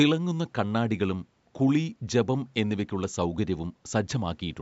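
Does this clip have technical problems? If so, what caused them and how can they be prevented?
No, there's nothing technically wrong here; the speech has simply passed through a call's microphone processing, which trims away the lowest bass and leaves nothing above 8 kHz, and that's just how such a path normally sounds.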